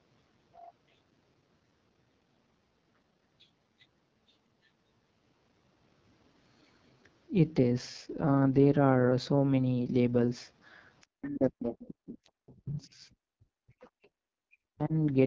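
Throughout, the AMR wideband (HD Voice) codec runs at 6.6 kbit/s, its lowest rate. The speech sounds rough and raspy, with a noisy, synthetic top end.

At 11.01 s a brief second voice slips in, about 40 dB below the speech. This is likely the other side's voice leaking through from an unremoved loudspeaker echo.

From 11.1 to 13.04 s the speech sinks deeply. This is likely speech suppressed in double talk, with the canceller ducking both voices at once.

Inside that stretch, at 11.79 to 11.87 s, the other side's voice leaks through again, stronger, about 20 dB below the speech.

From 13.29 to 13.83 s the speech drops deeply once more, likely again from double-talk suppression.

Right after, from 13.82 to 14.08 s, leaked far-end voice returns at about 30 dB down.

At 14.11 to 14.16 s the background is gated by the echo canceller. The room sound falls about 40 dB for a split second, then returns.

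From 14.44 to 14.93 s the speech is likely suppressed in double talk a final time and dips sharply before recovering.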